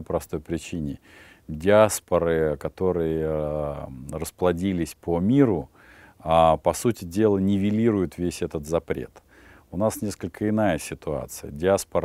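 No technical faults can be heard anywhere in this clip. There is nothing in the audio that needs a timestamp or a fault description.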